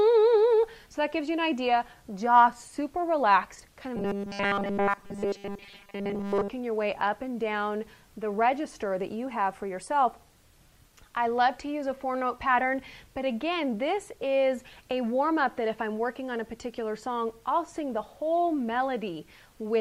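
From 3.96 to 6.50 s there's robotic sound from repeated short buffers: the audio goes stiff and metallic, locked to a 200 Hz buzz. That's likely the player starving for data and looping a roughly 5 ms chunk, so most of that stretch is repeats rather than real sound.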